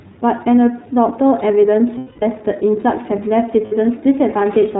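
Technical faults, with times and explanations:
Throughout: iLBC codec. The speech passes through a narrowband VoIP codec that fits the 13.33 kbps, 30 ms frame mode, coding each frame's excitation independently. Everything above 4 kHz is gone, and the plainly audible coding damage leaves the speech rough and slightly synthetic.
1.98 to 2.23 s and 3.66 to 3.72 s: lost iLBC frames. Packets went missing, roughly 240 ms then 60 ms, which fits eight and two 30 ms frames. The decoder repeats the last pitch cycle mixed with noise, so each gap sounds like a held, buzzy vowel that recovers almost at once.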